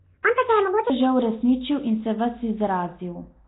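From 0 to 0.90 s, the opening of the speech was likely played against the wrong clock, so this section at the wrong speed runs about 1.67 times too fast. Speed and pitch rise together, lifting the voice roughly ten semitones into a hurried, chipmunk-like register.

Throughout, the speech was likely squeezed through Nellymoser compression, the old Flash microphone codec, with heavy damage. Nothing survives above 3.9 kHz, and weak bands are replaced by noise, giving a rough, hissy halo and a smeared, underwater quality that fits a bitrate around 16 kbps.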